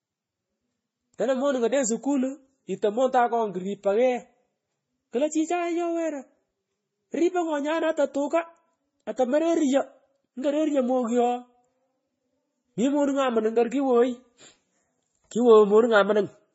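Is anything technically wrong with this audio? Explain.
Yes. Throughout the speech, the sound carries two layers of coding damage at once. Nothing is present above about 7.6 kHz. The likely cause is transcoding between lossy codecs, with a low-rate MP3 stage followed by Vorbis at a similar low rate. The second encoder spent its few bits re-coding the first one's artefacts and added its own. So the artefacts of both codecs are heard together on top of a dull, band-limited tone.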